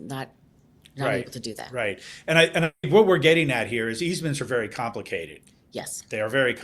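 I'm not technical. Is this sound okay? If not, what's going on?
No. From 2.63 to 2.85 s, after "I and", the sound fades into a buzz, then silence, resuming at "what we're getting at", with a bit lost. That's likely a long network dropout.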